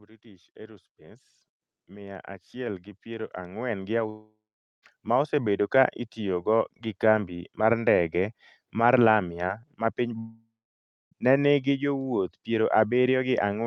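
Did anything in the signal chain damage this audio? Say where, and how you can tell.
Yes. Automatic gain rising in call processing: from 0.05 to 5.64 s, just before "ka itiyogo gi kambi", voice and background swell together by about 17 dB, gradually rather than as a sudden level step.

Long network dropout, likely caused by packet loss on the network, at 4.09–4.84 s and 10.18–11.13 s (after "ma piny", returning at "ne nigi jowuoth"). A fading buzz gives way to silence, and audio is skipped rather than paused.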